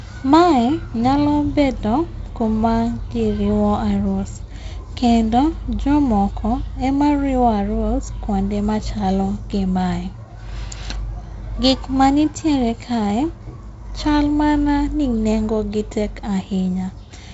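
No technical faults are audible.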